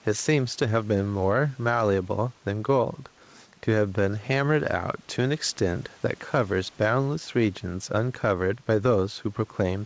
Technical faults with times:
0.00-9.86 gain pumping

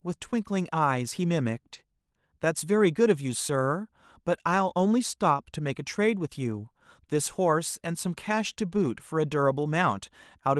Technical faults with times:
1.73-1.75 lost packet rebuilt from error correction
3.15-3.17 lost packet rebuilt from error correction
4.33-4.35 lost packet rebuilt from error correction
6.19 lost packet rebuilt from error correction
8.53-8.58 short concealed packet loss

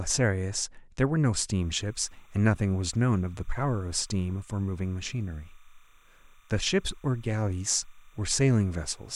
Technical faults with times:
1.61-9.16 timecode bleed

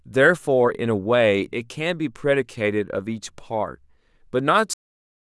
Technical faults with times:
4.73-5.30 cut-off end

